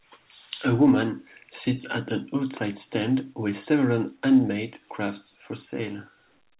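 No technical faults can be heard in this speech.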